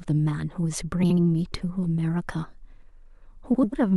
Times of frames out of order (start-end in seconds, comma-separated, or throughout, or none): 1.03-1.18, 3.54-3.73